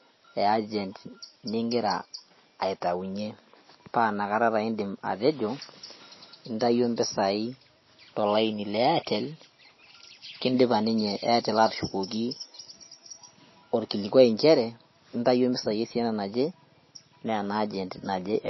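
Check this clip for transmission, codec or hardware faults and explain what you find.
One codec fault runs through the whole clip. MP3 compression is the likely cause: the treble stops at 5.8 kHz, pointing to a low bitrate near 24 kbps, and starved frequency lines flicker, leaving the speech watery and swirly with smeared attacks.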